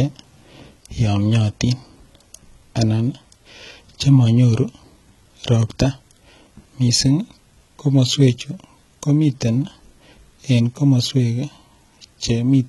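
Throughout the speech, the encoder likely coded only the lower spectrum and rebuilt the treble from copied bands, as HE-AAC compression does at what sounds like about 16 kbps. The damage is heavy: s sounds turn gritty and lispy, and nothing remains above 11.8 kHz.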